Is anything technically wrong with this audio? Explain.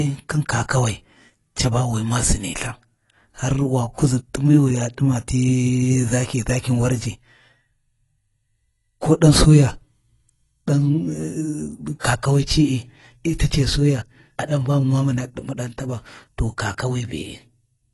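Yes. Throughout the speech, likely low-bitrate AAC compression, consistent with a 32 kbps stream, removes everything above 11.5 kHz, leaving dull, smeared sibilants with a plainly audible warbling fizz.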